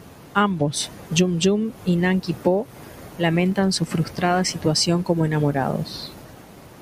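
At 3.52 s, just before "su frustrada situación como", a single sharp click cuts through the speech, likely from dropped samples: a fraction of a millisecond goes missing, so the waveform leaps between values. Unlike a dropout, no sound disappears, leaving only the click.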